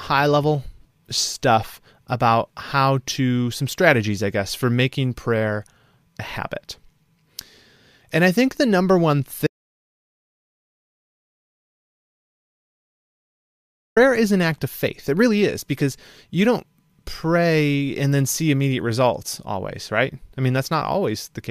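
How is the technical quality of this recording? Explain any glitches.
The recording has one clear glitch: an audio dropout to silence. It starts at 9.47 s, after "think the number one", and lasts about 4.5 s. The speech resumes at 13.97 s with "is an act of". The input was likely lost while recording continued. The gap is dead silent, with no room tone, and the speech in between is gone.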